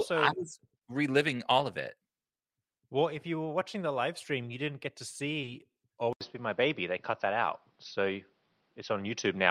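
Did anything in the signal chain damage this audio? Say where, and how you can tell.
Yes. At the network stage, just after "you didn't get to", there is short concealed packet loss: two back-to-back gaps at 5.41 to 5.45 s and 5.45 to 5.49 s, each about 20 ms of missing audio that the receiver filled in. Packets arrived too late or not at all, so the decoder extended the preceding sound and then blended back into real audio. You hear a brief smear rather than a hard hole. That distinguishes it from a buffer underrun or storage dropout, which would leave true silence or a click.

From 6.13 s to the end the sound changes abruptly. It drops out for about 80 ms, then comes back duller, with nothing above 6.1 kHz, a level shift of around 5 dB and a new background noise roughly 45 dB below the signal. This is likely an input switched to a poorer device at the capture stage, such as a different microphone or a headset call profile. 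A codec bandwidth drop would narrow the band but would not bring the short silence, a different noise floor and a level step all at once.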